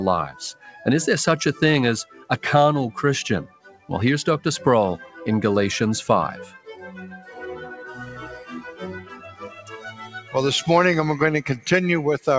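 A noise suppressor built for speech runs across the whole clip and treats the steady, sustained parts of this sound as noise. It rides the level up and down by around 10 dB, so held material pumps and thins while onsets pass mostly intact. Unlike a compressor's pumping, which follows loudness, this follows steadiness: the sustained portions sink even when they are not loud.

The sound cut by the noise suppressor is clearest at 0.53–0.8 s (about 13 dB down), 2.05–2.3 s (about 12 dB), 3.47–3.9 s (about 14 dB), 5.02–5.17 s (about 8 dB), 6.53–6.83 s (about 13 dB), 7.14–7.42 s (about 8 dB), 8.3–8.82 s (about 8 dB) and in a long stretch at 9.01–10.35 s (about 9 dB). Tails are clipped short and the level sags instead of vanishing, which is unlike packet-loss dropouts that leave gaps or glitches. Throughout, nothing sounds above 8 kHz, which points to a wideband call codec such as G.722.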